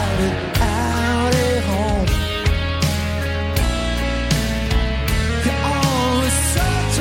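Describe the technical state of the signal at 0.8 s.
Around 0.8 s the signal is intact, with no audible dropout, distortion, noise burst or other fault at that point.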